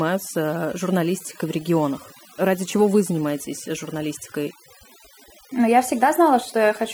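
A speech clip run through overdone noise removal from start to finish: the noise reduction was set too strong, shutting off individual frequency bands near its noise estimate along with quieter parts of the voice. The background in the gaps drops and breaks up into twinkling specks.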